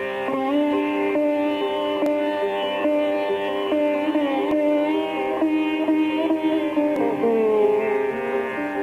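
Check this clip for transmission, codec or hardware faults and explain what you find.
There are three short skips in the sound, at 2.06, 4.51 and 6.96 s. They sound like audio missing between chunks, likely from a recorder working in 2.5 s blocks and losing roughly 50 ms at each handover. The two sides join directly, without the silent gap a dropout leaves, and the skips land at steady intervals rather than at random.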